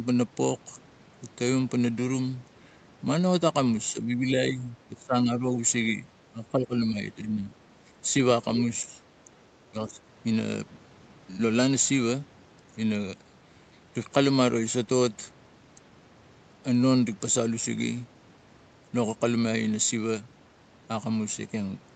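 Most likely the call's echo canceller, faced with both sides talking at once, mistook the speech for loudspeaker echo and turned it down: speech suppressed in double talk. The speech dips between 3.93 and 5.59 s, by around 20 dB at its worst, then again at 6.3 to 6.99 s, 7.21 to 7.53 s, 8.83 to 9.01 s and 9.71 to 10.01 s. Those later dips are shallower, roughly 10 to 15 dB.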